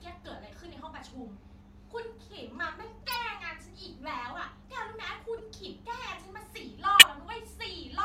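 Corrupt frames decoded at 3.02–3.17 s, 5.38–5.40 s and 6.99–7.03 s: damaged compressed frames played anyway, scattering energy into brief chirps and noise bursts, loudest by far at 7 s.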